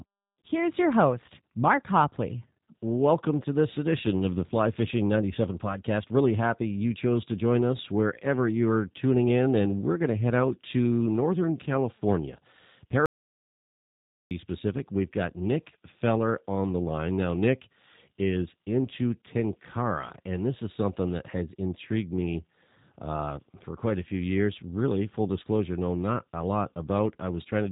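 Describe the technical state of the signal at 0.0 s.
At 0.0 s the speech already carries G.729 codec damage, present from the first sample to the end of the clip. The codec rebuilds each frame from a vocal tract filter, a pitch predictor and a few coded pulses rather than the waveform itself. Here that leaves the speech plainly rough and synthetic in texture, and nothing above 3.8 kHz survives. The sound fits an 8 kbit/s G.729A stream.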